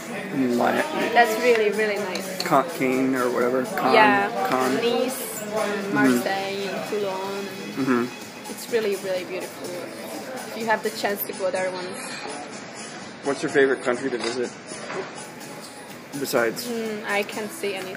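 From 11.23 to 15.23 s, an adaptive stream at a lower bitrate switches in when the connection slows. This fits a drop from 128 to 32 kbit/s MP3: nothing above 11.5 kHz, thicker codec artefacts. Unlike a dropout, there is no gap, only abrupt quality switches.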